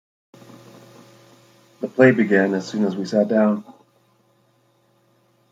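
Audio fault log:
No faults detected anywhere in the speech.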